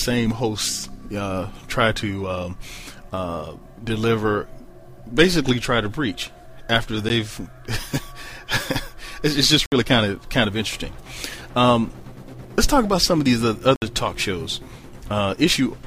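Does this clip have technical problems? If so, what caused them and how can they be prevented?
Yes. Three blocks of digital silence occur. A 13 ms dropout at 7.09 s sounds like a tick. Two 60 ms holes follow, at 9.66 to 9.72 s and 13.76 to 13.82 s. Each time, samples were replaced by zeros. The sound cuts off and back on with no fade. Giving the audio output enough buffer headroom and guarding processing against invalid values would prevent these gaps.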